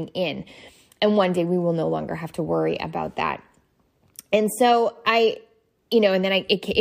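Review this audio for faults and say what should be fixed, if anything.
Nothing here needs fixing, since no faults turn up anywhere in this speech.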